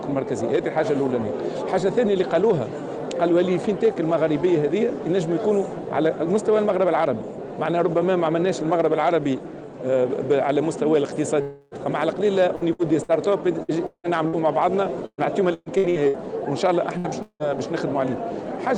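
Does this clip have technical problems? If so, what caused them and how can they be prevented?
Yes. Three kinds of fault interrupt the audio, which passes through an Opus call path whose upper limit is about 12 kHz.

Long network dropout: the connection likely stalled twice. From 11.41 to 11.74 s about 0.3 s is replaced by a fading continuation of the last sound. From 17.22 to 17.43 s about 0.18 s is lost, ending in roughly 70 ms of silence before the audio resumes further on. Prevention: use a stable wired or strong Wi-Fi link and avoid competing uploads.

Repeated packet loss (robotic sound): packets kept going missing. From 12.55 to 14.36 s there are six gaps, the longest 174 ms, and a quarter of the span is patched. From 15.06 to 16.17 s there are five gaps, the longest 121 ms, with 37% patched. The sound turns choppy with pieces missing. Prevention: reduce network congestion and enable forward error correction or a larger jitter buffer.

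Burst of packet loss: at 16.98 to 17.07 s, about 60 ms of consecutive packets were lost or arrived too late. The receiver stretched the preceding sound and faded it, so a brief held buzz or hiss covers the gap, and the audio resumes past the missing piece. Prevention: prioritise call traffic with QoS settings on the router.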